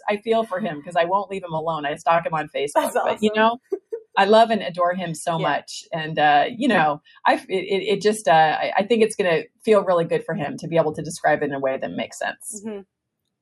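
Throughout the clip a noise suppressor built for speech is applied to music or sounds. It treats sustained, steady material and decaying tails as noise, so the level sways by around 5 dB as held parts are pulled down and onsets pass through. That gives a fluttering, thinned texture. A compressor's pumping would instead follow overall loudness, ducking hardest on loud attacks, whereas here the attacks survive and the quiet sustains are what sink. Between 3.64 and 4.16 s the sound is cut by the noise suppressor more deeply than anywhere else, dropping by about 21 dB at its lowest, with roughly a third of a second audibly affected. This differs from a dropout, which would be an abrupt gap to silence. Here the level sinks while sharper transients within the stretch still come through.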